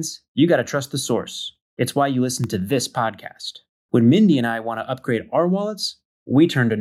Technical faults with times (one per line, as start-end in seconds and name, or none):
1.26-2.73 CD scratch ticks